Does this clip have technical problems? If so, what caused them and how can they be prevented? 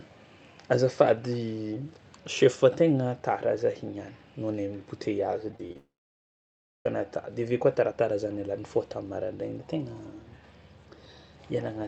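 Yes. Repeated packet loss (robotic sound) runs from 5.51 to 5.76 s. Five short holes, the longest 26 ms, were each patched by stretching the preceding sound, so about 30% of that quarter-second is synthetic and comes out choppy. A larger jitter buffer and forward error correction would prevent it.

A long network dropout follows from 5.77 to 6.86 s, likely caused by the connection stalling. About 1.09 s never arrived: a brief fading continuation gives way to roughly a second of silence before the audio resumes with that part gone. A more stable network link would prevent it.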